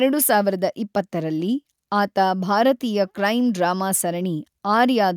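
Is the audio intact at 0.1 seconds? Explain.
Yes, at 0.1 s the speech plays through intact, with no dropout, click, distortion or other fault at that moment.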